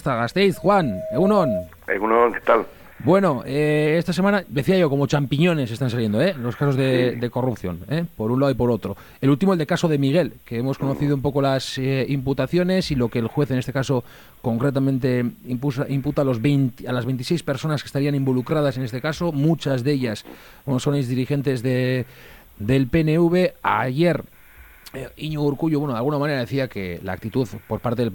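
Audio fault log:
0.54–1.72 s loudspeaker feedback squeal: a 635 Hz tone swells over roughly 0.7 s to about 5 dB above the sound, because the microphone–loudspeaker loop gain exceeded one at that frequency.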